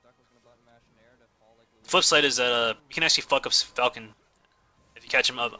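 No technical faults are audible.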